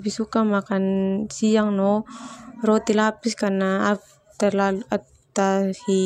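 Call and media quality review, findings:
De-emphasis applied wrongly, 0.0 to 2.0 s: speech dull and muffled, treble down about 11 dB at 10 kHz relative to 1 kHz. De-emphasis filter, no matching pre-emphasis. Smooth gradual slope, not a low-pass cutoff's abrupt edge.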